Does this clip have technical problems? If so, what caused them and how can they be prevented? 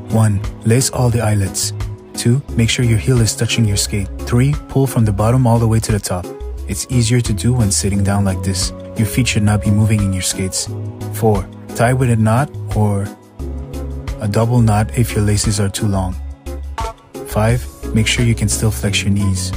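No, this clip doesn't have technical problems, so there is nothing to prevent.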